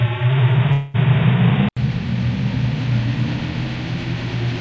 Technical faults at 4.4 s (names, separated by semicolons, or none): none